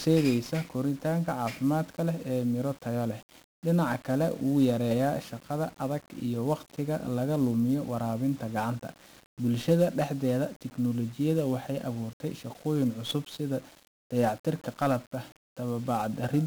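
From start to finish the speech carries heavy 1-bit DFPWM compression damage. Each sample is reduced to a single up-or-down step of an adaptive level, so the coder can only approximate the waveform. That leaves dense broadband quantisation noise, heard as a constant fuzzy crackle with hiss burying the treble, consistent with a stream of roughly 48 kbps. On a spectrogram, a grainy noise floor fills every band, smearing the upper harmonics. The waveform looks jagged and staircase-like.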